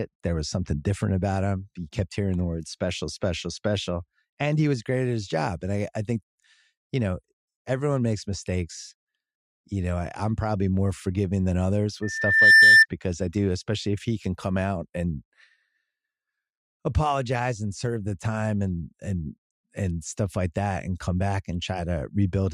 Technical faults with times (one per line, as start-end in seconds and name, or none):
12.02-12.86 loudspeaker feedback squeal